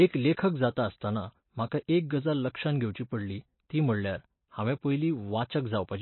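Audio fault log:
Throughout: MP3 compression, likely at a bitrate near 24 kbps, cuts everything above 4.1 kHz and drops weak detail, so the speech sounds dull and watery.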